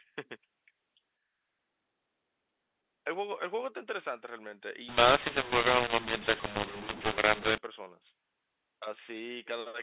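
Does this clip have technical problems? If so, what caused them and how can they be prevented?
Yes: from 4.88 to 7.58 s the speech turns harsh and gritty with hiss in the gaps, a classic mu-law and A-law mix-up, where A-law telephone audio was decoded as mu-law. Tag the G.711 law explicitly and have both ends agree on it.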